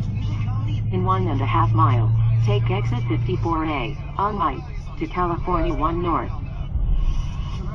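Jumps interrupt the sound at 4.39 to 4.42 s and 6.71 to 6.74 s, each a jump forward, first of about a tenth of a second, then about 150 ms. These are compressed frames skipped: the decoder dropped whole frames, a couple at the first point and about three at the second, which fits frames of about 46 ms.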